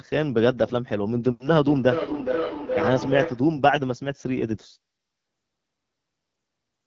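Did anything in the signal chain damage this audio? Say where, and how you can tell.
Yes. The codec stage has left its mark on the whole recording. This is the AMR wideband (HD Voice) codec running near the bottom of its range. The speech has a rough, raspy, buzzy texture, which fits a rate around 8.85 kbit/s. At that rate the pulse-driven vocal tract model can't track fine detail. On a spectrogram, energy stops sharply at about 7.5 kHz. The top band looks like smeared noise rather than harmonic structure.

There is feedback howl from 1.61 to 3.55 s. It comes from the acoustic loop between two devices sharing the call, so it sits outside any single piece of equipment. A tone around 500 Hz swells, with a loop delay of roughly 0.4 s, and peaks at about 4 dB below the speech. A spectrogram shows a bright horizontal line at that frequency. The waveform shows a growing envelope that collapses at 3.55 s.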